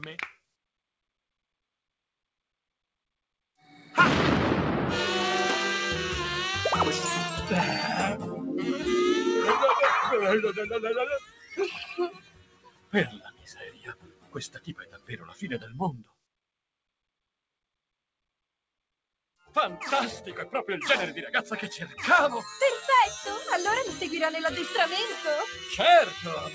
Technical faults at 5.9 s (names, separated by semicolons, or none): noise suppressor applied to music or sounds